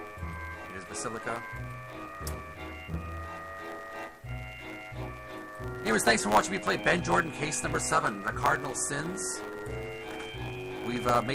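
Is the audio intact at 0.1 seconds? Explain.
No. A block size mismatch (truncated) runs through the whole clip, including 0.1 s: one stage writes longer blocks than the next reads, consistent with 512-sample blocks, so each block's tail is dropped. This gives a 100 Hz buzz and plays the audio 1.07 times faster at roughly normal pitch.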